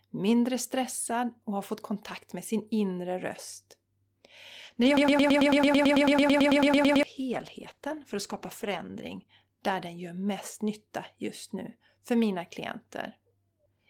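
At 4.65 s the call's bandwidth estimate fell and the encoder was pushed from 32 kbps down to 13 kbps, staying at its lowest for about 4.2 s. This call bitrate drop makes the speech rough, watery and muffled until full quality returns at 10.13 s, just before "mest nytta just nu".

From 4.97 s to 7.03 s a broken-record loop plays. A 110 ms fragment repeats exactly, back to back, 19 times, and the speech that should have filled that stretch is lost. The likely cause is a stalled player or stream that kept resending its last held fragment.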